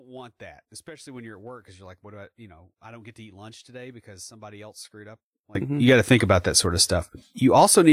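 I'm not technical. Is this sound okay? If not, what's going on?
No. From the start until about 5.55 s the speech becomes very faint. The likely cause is one channel inverted, so the two sides cancel when mixed together. A plain volume drop would keep the fullness.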